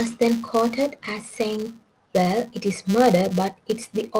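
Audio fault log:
throughout: filter restarted on every block. Each processing block starts from a cleared filter state, leaving a tiny onset transient that forms a 200 Hz buzz, which fits a block every 5 ms. Unlike mains hum, it rises and falls with the speech level and vanishes in pauses.
2.24–2.29 s: short stall from a late packet. A packet arrived late, so the receiver held the last sound for about 22 ms before carrying on, leaving everything 22 ms later afterwards. Unlike a dropout, nothing is missing. The sound is stretched rather than cut.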